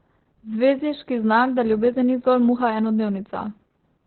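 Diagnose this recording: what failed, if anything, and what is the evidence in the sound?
The codec stage failed: Opus voice compression runs through the whole speech clip. The band stops at about 4.2 kHz, so the voice sounds muffled and telephone-narrow. It also sounds hoarse and slightly robotic. That points to Opus running its SILK linear-prediction coder in narrowband mode at a very low bitrate, around 8 kbps. With so few bits, the encoder drops everything above 4 kHz and codes the excitation coarsely. The lost breath and harmonic detail become that rough, buzzy texture.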